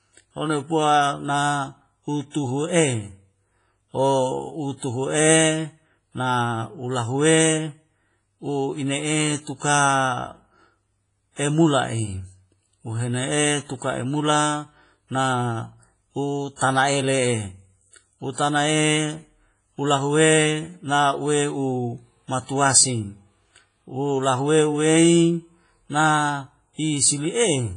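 WMA compression runs through the whole speech clip. It sounds ringing and washy, with a hiss that swells and fades along with the signal, and nothing above 10.5 kHz. The likely cause is a heavily compressed transform codec, consistent with a low bitrate around 24 kbps, that drops weak components and smears its noise across long blocks.

Pre-echo appears at 2.30, 4.77, 16.56 and 18.33 s. Before each sharp onset comes a brief hiss lasting 39, 53, 50 and 51 ms respectively, and the onset itself sounds softened. The noise sized for the loud attack spreads over the whole block and fills the quiet moment before it.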